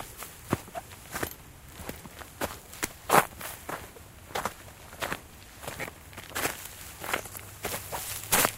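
A recording of sounds with lost LE Audio frames at 5.82–5.84 s and 8.08–8.10 s. The decoder briefly fills each gap with a noisy smear, which fits a few dropped 7.5 ms frames.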